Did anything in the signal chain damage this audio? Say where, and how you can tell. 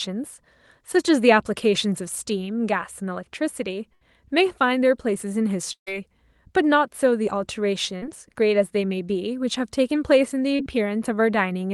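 Yes. Burst of packet loss, a network-stage fault, at 3.93–4.03, 5.73–5.89 and 7.97–8.04 s. The receiver stretches the last sound into a fading buzz or hiss and falls silent in the middle gap, then resumes with 80, 140 and 60 ms missing.

Short concealed packet loss, also from the network, at 10.56–10.62 s. About 40 ms arrived too late, so the decoder extrapolated the preceding sound and blended back, leaving a brief smear.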